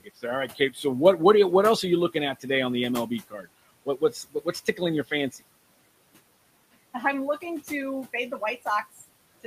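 Speech cut by the noise suppressor at 0–0.24, 0.48–0.79 (before "what what you what"), 3.3–3.47 and 3.86–4.8 s: speech mistaken for noise drops by up to about 18 dB, sounding faint and swallowed.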